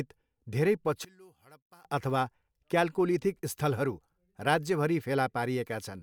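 From 1.05 to 1.85 s, one channel was likely inverted, so the centred speech cancels in mono, falling about 29 dB to a faint residue.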